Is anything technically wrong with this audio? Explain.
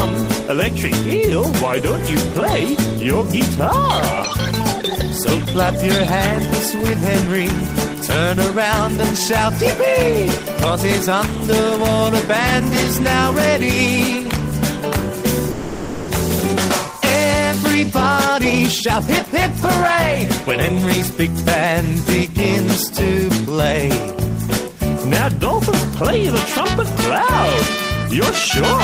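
Yes. From 15.51 to 16.11 s there is a call audio freeze: the last sound stretches into a fading buzz for about 0.57 s, likely because delayed packets emptied the jitter buffer, before resuming without loss.

Jitter buffer speed-up follows at 17.75 to 19.36 s (127% speed, around 0.4 s removed) and 20.43 to 21.73 s (106%), where pitch-period trimming rushes the audio without changing its pitch.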